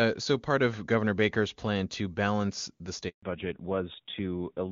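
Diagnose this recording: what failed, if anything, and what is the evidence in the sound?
Handover gap, network stage: right after "plan to balance the", the sound dies within a few tens of milliseconds and stays silent from 3.09 to 3.23 s, about 140 ms. It is a clean hole with no concealment buzz or repeated fragments, because no frames arrived while the call switched networks.

Fallback to narrowband, codec stage: from 3.23 s to the end, everything above 4 kHz is gone and the voice turns duller and rougher. It begins at the same instant the gap ends and holds steady, which separates it from gradual degradation. Before 3.09 s the wideband content sounds clean and full, which fits HD Voice at around 23.85 kbit/s; the new link likely renegotiated to a narrowband codec around 7.4 kbit/s.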